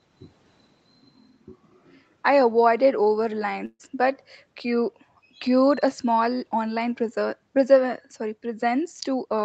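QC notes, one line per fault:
3.65–3.81 s, burst of packet loss: about 140 ms of speech went missing, so the receiver stretched the last sound and faded it down, giving a held, decaying tail that sinks into about 30 ms of silence before speech resumes past the gap.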